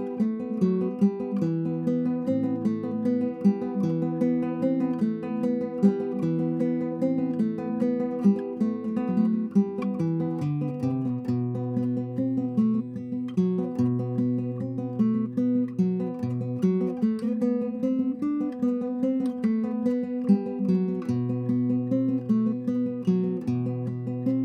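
Nothing here gives me pause; the audio runs along without a single technical fault to point at.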